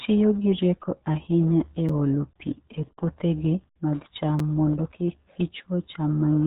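The whole recording carries the sound of the RealAudio 14.4 codec, the RealAudio 1 speech coder. The top of the spectrum is cut off at about 3.8 kHz, so sibilants and consonant detail are gone. The damage is heavy: vowels come out muffled and gargly, with a watery, smeared texture where the coder's crude model of the voice fails. That degree of loss fits a bitrate of about 8 kbit/s.

A gap between chunks breaks the speech at 1.89 s, between "gi rieko ahinya e" and "olo pi e puothegi", and again at 4.39 s, between "e puothegi mag cham" and "mondo kik". Each hole is 6.5 ms of silence, heard as a brief hole in the sound. The two are spaced 2.5 s apart, which points to audio delivered in 2.5 s blocks with silence inserted at each join.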